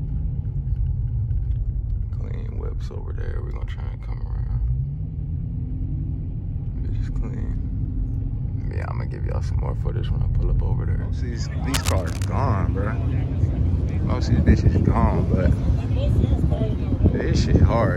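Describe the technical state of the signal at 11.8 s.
Cable scratch noise runs from 11.74 to 12.25 s, so 11.8 s falls just after its onset. For about half a second, dense, irregular bursts of crackling noise sit roughly 10 dB below the signal, heard as a scratchy rustle over the sound. The cause is likely a worn cable, connector or control being moved, its contact resistance jumping rapidly and injecting those uneven noise bursts into the signal path.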